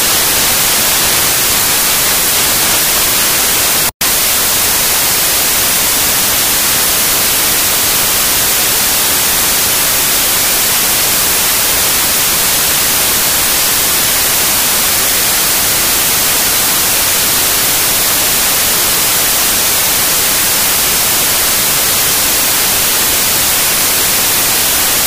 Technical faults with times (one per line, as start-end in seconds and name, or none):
0.00-25.06 samples built from the wrong bytes